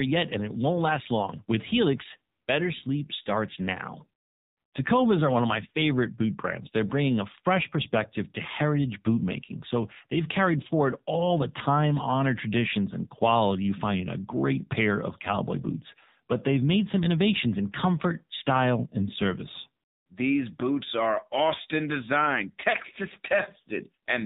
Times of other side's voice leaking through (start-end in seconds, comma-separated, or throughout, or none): none